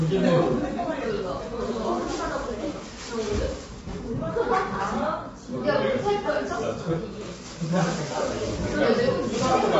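A recording of everyday sounds that comes across rough and grainy from start to finish, with hiss filling the gaps between tonal components and the top end cut off, so nothing is heard above about 7.8 kHz. The likely cause is low-delay AAC compression of the AAC-ELD kind used for calls. Its very short frames cannot separate closely spaced frequencies cleanly, and at a rate that fits roughly 24 kbps the damage is plainly audible.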